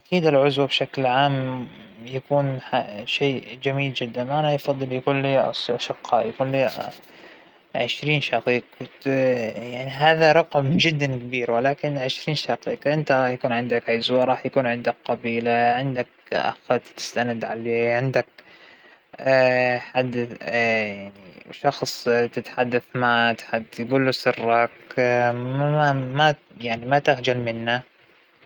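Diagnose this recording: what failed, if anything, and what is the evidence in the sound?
Nothing failed; no faults heard.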